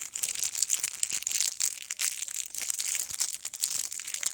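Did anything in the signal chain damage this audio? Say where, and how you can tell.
Yes, in the network. From 2.75 to 3.28 s, repeated packet loss (robotic sound) leaves four short holes, longest 20 ms, patched by repeating earlier sound.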